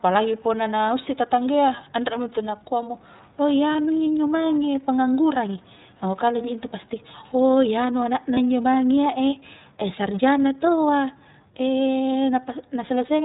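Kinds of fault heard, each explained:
iLBC codec: The whole speech clip passes through a narrowband codec working in 30 ms frames, which fits roughly 13.3 kbps. Nothing above 4 kHz survives, so a spectrogram shows a hard ceiling there. The coding damage is plainly audible as a rough, slightly synthetic quality.
Lost iLBC frames: Two single 30 ms frames drop out, at about 3.72 s and 8.34 s. The decoder fills each gap by repeating the last pitch cycle blended with noise, heard as a brief buzzy held vowel. The waveform shows a short periodic patch, and normal sound returns immediately after.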